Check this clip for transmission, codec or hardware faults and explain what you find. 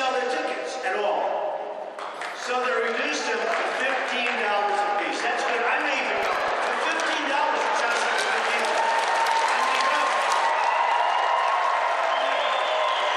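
Two faults are audible: a short burst of crackle followed later by a stretch of overly bright sound.

From 6.18 to 6.51 s a gritty, tearing crackle cuts into the audio and stops abruptly. This is processor overload crackle: the processor fell behind and missed a run of very short buffer deadlines, each under a millisecond. Every missed buffer leaves a hard-edged gap of silence, and the rapid chain of them, around fifteen by the sound of it, blurs into crackle.

From 7.90 to 10.50 s the sound turns thin, glassy and sibilant, with treble about 8 dB too strong at 10 kHz relative to 1 kHz. This is pre-emphasis left on: the high frequencies were boosted for recording or transmission, and the matching de-emphasis cut was never applied on playback. The shape of the boost fits the CD 50/15 µs curve.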